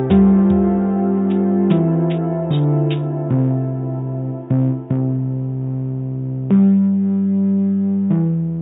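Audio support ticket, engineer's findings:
No faults found on listening.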